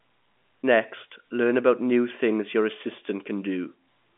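No technical faults can be heard in this speech recording. It carries the narrow band of G.711 telephone coding, with the sound confined to roughly 200 Hz to 3.5 kHz and nothing present above about 3.7 kHz.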